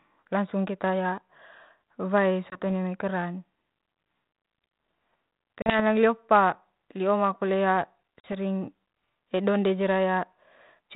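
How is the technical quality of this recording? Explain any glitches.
The recording has three short dropouts typical of packet loss on an ADPCM call, heard over a narrowband telephone sound whose light hiss fits G.726 ADPCM at 32 kbit/s.

At 2.5 to 2.59 s, 5.62 to 5.81 s and 8.2 to 8.26 s, hard-edged silent gaps of roughly 20, 40 and 40 ms appear, suggesting one or two lost packets each. The speech then resumes with brief distortion that settles within tens of milliseconds, or about 0.15 s after the second gap. This happens because the decoder's adaptive predictor and step size drift out of step with the sender's during each gap.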